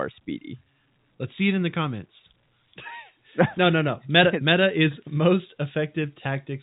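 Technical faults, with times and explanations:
No technical faults can be heard in this speech recording. It carries the sound of G.711 telephone coding, with nothing above about 3.8 kHz and any quantisation noise faint at most.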